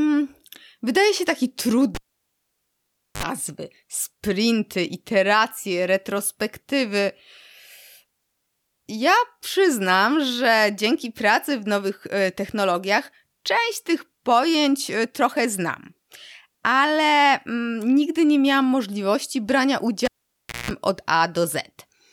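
At 1.95 s, right after "się taki", a pop cuts the speech to near silence for about 1.23 s, then a short 55 ms burst of 50 Hz mains buzz and a second pop as the sound returns by 3.23 s. At 20.05 s, after "nie miałam możliwości brania", the same pattern recurs: a 0.61 s dropout, a longer 189 ms buzz at 60 Hz, and recovery at 20.71 s. Both are a cable pulled and plugged in while live. The buzz is the tip touching first, before the ground connects.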